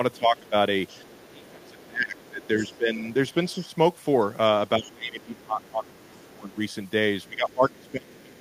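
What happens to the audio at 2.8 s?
At 2.8 s a faint second voice, the other side's voice leaking through, sits well below the talker from 0.13 to 3.7 s, likely loudspeaker echo the canceller left behind. Over 0.17 to 3.69 s, speech is suppressed in double talk: the talker's level dips deeply in pieces, totalling about two seconds, likely because the canceller turned everything down while both sides spoke.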